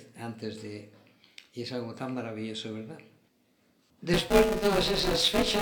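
From 4.14 s to the end there's buffer tearing: a steady robotic buzz at 200 Hz, riding on the sound itself. Writer and hardware have slipped in the ring buffer, so most of each 5 ms period replays audio from about 20 ms earlier, with hard joins either side.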